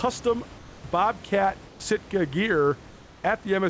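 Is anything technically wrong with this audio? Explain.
Yes. There is comfort noise in place of the background, from 0.58 to 0.84 s and again from 1.68 to 1.80 s. In both pauses the real room background, about 23 dB below the loudest sound, gives way to a smooth, featureless hiss about 2 dB quieter. The likely cause is discontinuous transmission: the sender's voice detector hears no speech and stops sending, and the receiver fills each pause with synthetic noise until the sound returns. The audio contains nothing above 8 kHz, as expected from a wideband call codec.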